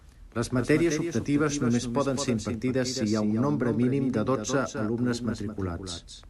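Speech with a doubled audio track throughout: a dry, full-band copy trails the original by roughly a fifth of a second at about 10 dB lower, likely from a second, slower capture path.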